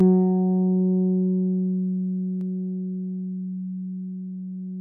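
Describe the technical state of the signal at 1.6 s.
At 1.6 s you're inside a stretch of channel delay comb filtering that runs from the start to about 2.41 s. One channel trails the other by roughly 5 ms, and when the two fold down to mono, the shared content cancels at evenly spaced points. The first notch lands around 100 Hz, with more stacked up the spectrum from there. It gives the sound a hollow, phasey colour that stays fixed rather than sweeping.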